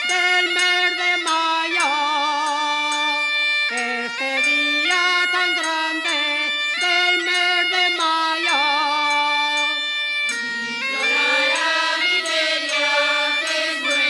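No technical faults can be heard in this audio. There is nothing at any point in the recording that calls for a time or a cause.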